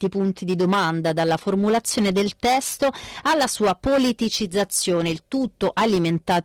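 Hard clipping runs through the whole speech clip. The signal is driven about 12 dB past what the chain can pass. Around a tenth of the samples hit the ceiling and are cut flat. Every loud syllable carries a harsh, buzzing fuzz. The full-band Opus coding underneath adds only light smearing.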